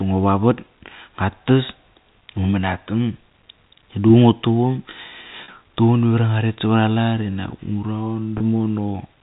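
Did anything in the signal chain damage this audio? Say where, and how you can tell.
Yes, at the network stage: packet loss with pitch repetition, at 5.44–5.48 s and 8.38–8.40 s. The first gap is about 40 ms, which fits two lost 20 ms packets; the second is about 20 ms, one packet. Each sounds like a brief, buzzy held tone. The receiver's concealment looped the last pitch period over the gap. On a waveform that shows as identical repeating cycles; on a spectrogram, flat harmonic lines replace the natural pitch movement. The G.711 telephone band limit above 4 kHz is visible throughout.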